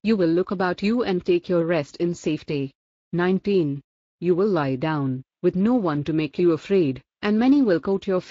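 There are no technical faults to describe in time order anywhere in this speech recording.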